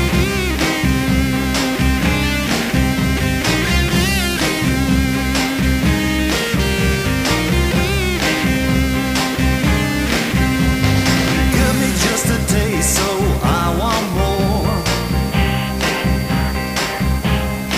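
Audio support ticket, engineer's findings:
Feedback whistle from 14.19 s through to the end. Thin steady tone near 4.6 kHz sitting well under the programme, roughly 20 dB down, level swelling and fading slowly. Likely a speaker-to-mic loop parked right at the feedback threshold, so one frequency keeps ringing without taking off. Worth checking monitor placement and mic gain, and notching around 4.6 kHz if the room can't be changed. Doesn't build or run away, just hangs there till the clip stops.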